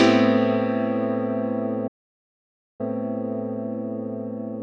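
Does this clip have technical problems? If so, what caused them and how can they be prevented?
Yes. A playback stall from 1.87 to 2.81 s silences the sound for about 0.92 s, likely because the player's buffer ran dry or its thread was blocked. Keeping a deeper playback buffer and running the audio thread at high priority prevents this.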